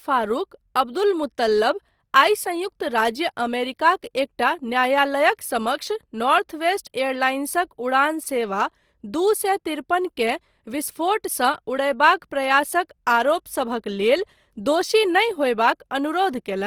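Speech, likely passed through Opus compression at a low rate that fits about 24 kbps in its CELT music mode, where energy is kept per band but fine detail is filled in. Throughout, the speech sounds noisy, rough and grainy, though bandwidth stays full to about 20.2 kHz.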